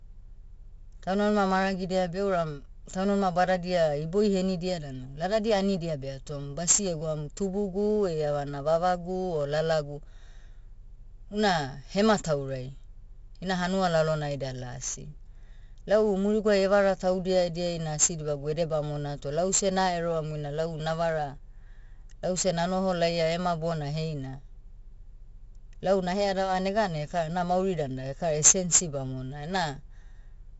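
Speech runs through 4-bit ADPCM compression from start to finish, and the damage is heavy. Every loud syllable carries a gritty hiss that swells and fades with the level, and sharp onsets break up where the adaptive step lags behind the attack. Nothing reaches above 7.6 kHz, which points to roughly a 16 kHz sample rate at 64 kbps. Unlike perceptual codecs, there is no swirling or watery warble, only level-tracking broadband grit.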